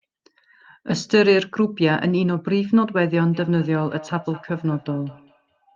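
From 3.29 s to the end of the clip, feedback echo between two devices appears. A second device in the same room replays the call audio, and the first microphone picks it up again. Its echo canceller only removes its own playback, so the loop survives. The speech returns as discrete repeats about a fifth of a second apart, each thinner and more ringing, peaking about 21 dB below the direct sound. Room reverberation smears smoothly, and a single-device echo repeats only once. Here the repeats come back at that fixed interval. The call codec's upper limit near 12 kHz cuts off the highest frequencies.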